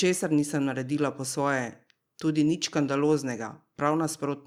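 A speech recording with nothing technically wrong with it.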